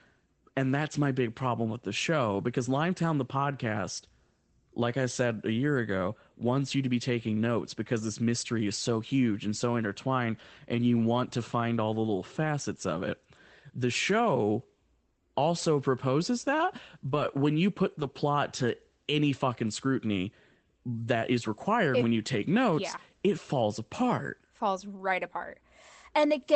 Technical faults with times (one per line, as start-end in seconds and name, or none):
11.13-11.19 lost packet rebuilt from error correction
17.07-17.29 lost packet rebuilt from error correction
18.01-18.07 lost packet rebuilt from error correction
24.97 lost packet rebuilt from error correction